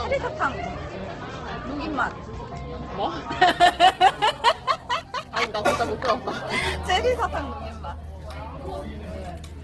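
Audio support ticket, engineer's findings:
Grainy, rough texture across the whole clip; tonal parts turn noisy rather than swirling. Nothing above 12 kHz. Likely Opus compression in CELT music mode, with damage heavy enough to suggest a bitrate around 12 kbps. The encoder holds each band's energy but fills starved bands with folded or noise content. Spectrogram: hard ceiling at 12 kHz and smeared, speckled texture in the upper bands instead of clean harmonic lines, with few empty holes.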